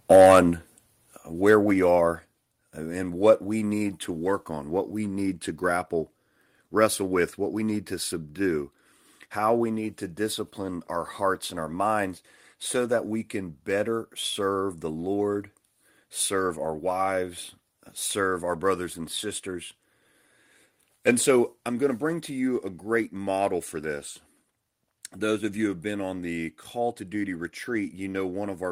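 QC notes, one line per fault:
0.1–0.4 s, microphone overload: peaks run about 6 dB past the converter's limit, with roughly a tenth of samples flattened. The crackle tracks loud syllables, likely from input gain set too high.
1.49–1.55 s, microphone overload: a briefer, milder clip, about 2 dB over. The harsh edge comes only on the peak, not as steady codec grit, likely from the same hot input.
0.16, 1.17, 2.19 and 21.7 s, microphone volume stepped down: level drops abruptly by about 3 dB, about 6 dB at 1.17 s. Voice and background fall together in one step rather than a gradual fade, likely the call software cutting input gain.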